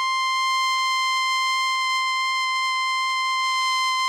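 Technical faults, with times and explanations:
No technical faults are audible.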